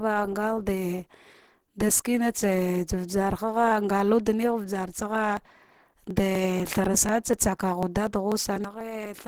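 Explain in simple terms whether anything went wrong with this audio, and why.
The whole clip of speech sounds muffled, hoarse and grainy. That points to Opus compression, likely at a low setting. To save space, the encoder has used its speech mode, which fills in fine detail roughly instead of keeping it.

From 5.37 s to 9.06 s there are periodic USB or driver dropouts. A steady tick is heard about every 0.25 s, around 15 times. Each tick is a tiny gap of a few milliseconds where sound was skipped, because something briefly blocked the audio path.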